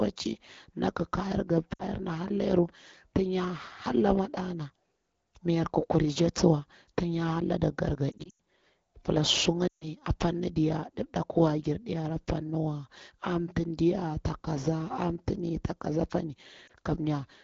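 Lost AMR speech frames occur in this speech at 1.73–1.83 s, after "tin ya hara lade" at 8.12–8.33 s, after "pila su" at 9.68–9.88 s, and after "kaza apani" at 16.67–16.71 s. The decoder repeats the last good pitch and vocal tract settings at falling gain, so the sound warbles and drops to near silence within two frames. Near 8.1 s about 160 ms of loss is scattered over 280 ms. The wideband audio underneath stays clear, which fits AMR-WB at around 12.65 kbit/s.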